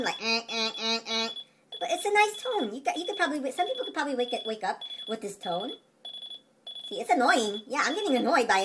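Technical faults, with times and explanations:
No technical faults can be heard.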